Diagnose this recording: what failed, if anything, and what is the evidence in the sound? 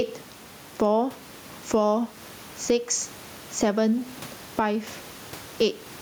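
Gain pumping runs through the whole clip, with a gain swing of around 10 dB; the room's background noise sits about 34 dB below the speech. The likely cause is input gain set far too high at the microphone stage, with a fast limiter or compressor clamping each loud sound. The speech stays squashed and even in level.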